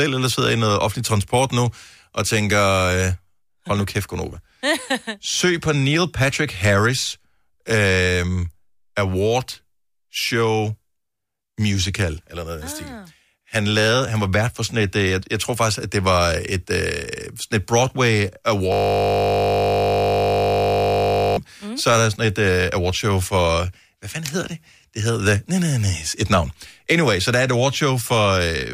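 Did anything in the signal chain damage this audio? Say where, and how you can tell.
Yes, a system hang loop at the driver or buffer stage from 18.72 to 21.37 s: one 20 ms slice of speech repeats well over a hundred times, giving a steady 50 Hz buzz. The waveform shows identical periods, and the spectrogram shows flat harmonic lines every 50 Hz.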